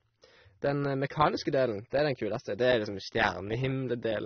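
Transcoding between lossy codecs runs through the whole clip. Nothing remains above about 6.3 kHz, so the speech sounds dull and band-limited. Two distinct layers of coding damage are audible together. This most likely comes from the audio being encoded with one lossy codec and then re-encoded with another. The pattern fits a low-bitrate MP3 followed by an even leaner AAC-LC, with the second encoder wasting bits on the first one's errors.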